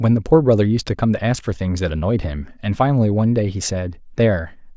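Speech recording with no audible technical faults.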